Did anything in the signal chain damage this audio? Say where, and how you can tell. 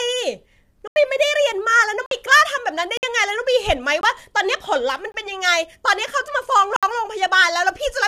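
Yes, two stages left marks. At the codec, the speech sounds rough and grainy throughout, with noise filling between harmonics and a synthetic-sounding top band. That's likely low-delay AAC compression (AAC-ELD), whose short frames resolve pitch poorly, and the damage fits a starved bitrate around 32 kbps.

At the driver or buffer stage there are blocks of digital silence: 0.88–0.96 s (85 ms), 2.06–2.11 s (51 ms), 2.97–3.03 s (56 ms), 4.01–4.03 s and 5.12–5.14 s (21 ms each), and 6.76–6.83 s (64 ms). Each drops hard to silence and comes back with no fade. The 21 ms holes fit an unfilled 1024-sample buffer, and the first fits 4096 samples.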